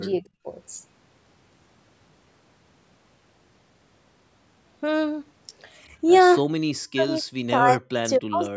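A speech recording where the talker's level collapses in pieces three times: briefly at 0.2–0.47 s, then at 6.41–7.23 s and 7.49–8.42 s, dropping by as much as about 40 dB. This is likely speech suppressed in double talk, the echo canceller muting the talker during overlap.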